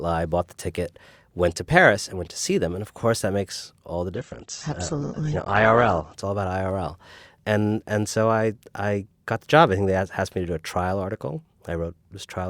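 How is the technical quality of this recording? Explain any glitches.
One glitch stands out: a two-second dip in quality partway through the speech. From 4.14 to 6.14 s, just after "that makes all the", the treble suddenly vanishes, with nothing above about 8.2 kHz, and the voice turns thinner, with audible codec smearing. There's no gap or dropout; quality simply steps down and later steps back up. This is an adaptive stream at a lower bitrate. When the connection slowed, the player switched to a much leaner encoding, which fits a drop from roughly 64 kbit/s to 12 kbit/s Opus, before recovering.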